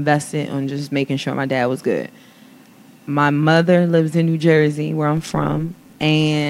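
From 5.17 to 6.04 s the speech carries overlap-add ripple. Frames were rejoined with overlaps not summing to constant gain, so level swings about 6 dB around 150 times a second, a rough robotic buzz. The waveform envelope scallops regularly, and the spectrogram shows fine vertical striping.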